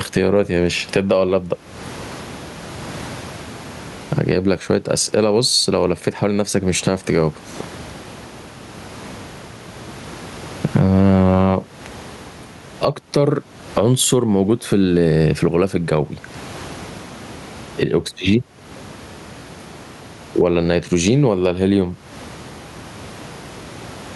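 From start to finish the speech shows gain pumping. The room noise sits about 38 dB below the voice, and the gain swings by around 20 dB. The likely cause is input gain set far too high and a fast limiter or compressor clamping it on every loud syllable, so loud and quiet passages land close in level and the voice sounds squashed. On a waveform the peaks form a flat, even ceiling.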